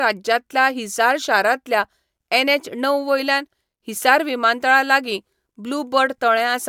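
Nothing in this recording trips over itself anywhere along the way, so there's no fault to point to or place in time.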